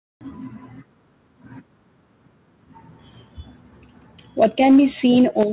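From 4.42 to 4.79 s the speech breaks into a harsh crackle, the signature of microphone overload: peaks about 4 dB over the converter's limit, likely an input set too hot, so a noticeable share of samples clip. On the waveform the loudest peaks are flattened. At 4.44 s the level drops by about 4 dB in one step, a microphone volume step-down, likely the call software cutting input gain after that distortion, and the envelope shows a clean downward step. The clipping returns more mildly from 5.05 to 5.43 s, about 1 dB over with only a few tops squared off and faint splatter in the spectrogram. At 5.43 s a second, much steeper drop of about 10 dB follows, visible as an abrupt shrink in the waveform and a dimming across the band, which stops at 4 kHz as the G.711 call path does.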